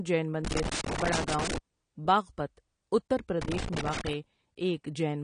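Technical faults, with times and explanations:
Throughout, AAC compression: Nothing reaches above 10.1 kHz, so the speech sounds dull, and coding damage is plainly audible. This likely comes from AAC-LC encoding at a low bitrate, around 32 kbps. The encoder lowers its cut-off and coarsely quantises what remains.
0.45 to 1.58 s and 3.42 to 4.13 s, loose connector crackle: Two irregular bursts of crackle and scratching cut into the sound. A worn or dirty contact is making and breaking rapidly as it shifts. Each break chops the signal into fragments.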